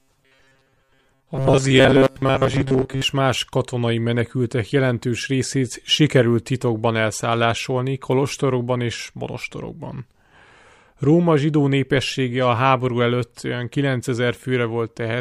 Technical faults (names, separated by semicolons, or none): robotic sound from repeated short buffers